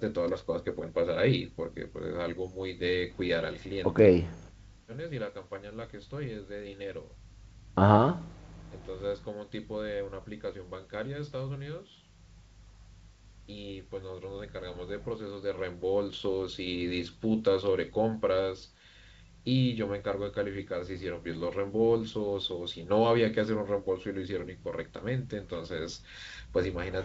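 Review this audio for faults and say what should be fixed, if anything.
Nothing needs fixing: the speech carries the full wideband character of G.722 telephone coding at 64 kbit/s, with content reaching up to about 7 kHz, and no faults can be heard anywhere in it.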